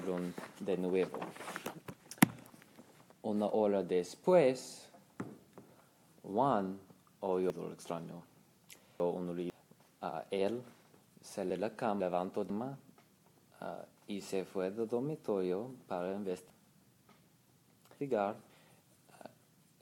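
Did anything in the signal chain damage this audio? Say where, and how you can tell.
Yes: chunks out of order, at the buffer or packet-reassembly stage. From 2.0 to 3.0 s and 11.5 to 12.5 s, a 500 ms chunk plays one slot late. From 7.5 to 9.5 s and 16.5 to 18.5 s, one plays three slots late. Each spot sounds jumbled. Unlike a dropout or concealment gap, no audio is missing or smeared; the same material is just played in the wrong order.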